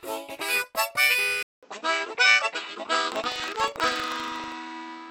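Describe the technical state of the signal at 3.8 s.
At 3.8 s the signal runs through what is likely an input switched to a poorer device, in effect from 1.43 s to the end. A 200 ms silence marks the changeover, after which the band narrows, the level shifts by about 5 dB, and a new noise floor sits roughly 35 dB below the signal, giving a duller, boxier sound.

Buffer tearing is also present from 3.08 s to 4.55 s. The writer and reader of the ring buffer have drifted into each other, so a small slice of each period, around 3 percent, replays audio roughly 150 ms old between hard joins. This produces a 25 Hz robotic rattle that is audible only while sound is present.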